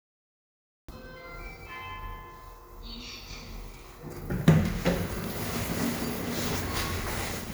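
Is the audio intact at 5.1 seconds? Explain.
Yes, at 5.1 seconds the audio is intact, with no dropout, click, distortion or other technical fault at that point.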